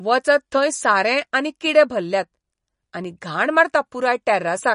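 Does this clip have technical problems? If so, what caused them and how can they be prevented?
Yes. Throughout the speech there is a watery, swirly quality with smeared consonants, likely from MP3 compression at a low bitrate, around 40 kbps. A spectrogram shows a hard ceiling at 10.6 kHz and flickering gaps where weak frequency lines drop out. Encoding at a higher bitrate, or keeping a lossless copy, would prevent it.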